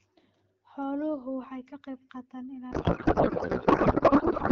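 From 2.72 s to the end, a codec payload misread: octet-aligned AMR frames parsed as bandwidth-efficient shift every field, so the speech becomes garbled noise and warble.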